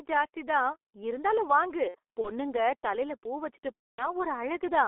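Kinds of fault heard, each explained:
G.723.1 codec: muffled, hoarse speech with smeared consonants throughout, from heavy coding at 6.3 kbit/s within a 300 Hz to 3.5 kHz band.
VoIP packet loss concealed by the speech codec: after "ஜாஸ்தி தான் இருந்தாலும்" and "பூ வச்சுட்டுப்", speech is stretched into a buzzy tone or coloured noise that fades while the decoder extrapolates across missing 30 ms frames.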